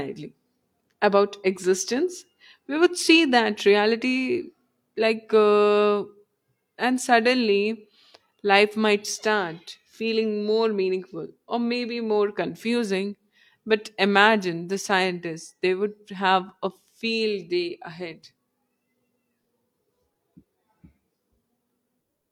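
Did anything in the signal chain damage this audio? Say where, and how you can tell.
No, nothing in the chain has left an audible mark: the speech signal holds together at every stage, with no point where the recording, conversion, transmission or playback path can be heard to break down.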